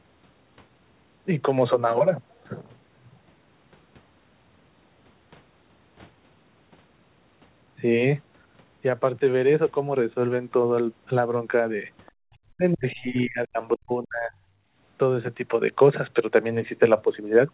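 At 12.06 s there's a very faint scrap of another voice underneath, well below the main speech, and again from 12.92 to 13.0 s. That's the other side's voice leaking through, likely loudspeaker echo the canceller didn't fully remove from the mic.

From 12.52 to 13.58 s, and again from 13.75 to 14.34 s, the speech itself gets pushed way down, by around 40 dB at its deepest, dipping and breaking up in pieces. It sounds like speech suppressed in double talk: likely both ends talking at once, so the canceller ducked everything.

Then from 14.62 to 14.76 s the room background briefly drops by about 13 dB and comes straight back. That's the background gated by the echo canceller, clamping the mic for a moment while the loudspeaker played.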